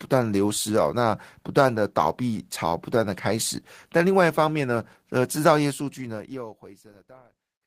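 No technical faults can be heard in this speech clip.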